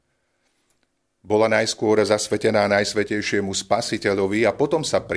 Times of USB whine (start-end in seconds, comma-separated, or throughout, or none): none